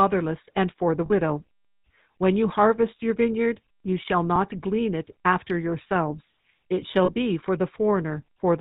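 The speech here has been carried through the GSM full-rate codec, which rebuilds the voice from a vocal-tract model driven by regularly spaced excitation pulses and keeps only a fraction of that excitation. The result is plainly audible throughout: nothing survives above 4 kHz, and the voice takes on a buzzy, gravelly roughness, a quality that fits the 13 kbps full-rate coder. Two short bursts of lost GSM frames also occur, one from 1.06 to 1.11 s right after "and for the", and another from 7.04 to 7.11 s. Each loses about 40 ms, which fits two 20 ms frames. The decoder fills each gap by repeating the last good frame's settings, so the sound briefly freezes into a rough, metallic ring before normal decoding resumes.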